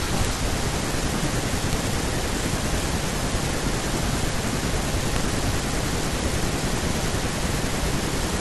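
Integer overflow at 1.73 to 1.93 s and again at 5.16 s: speech peaks about 2 dB past the integer limit wrapped to the opposite sign, producing harsh cracks.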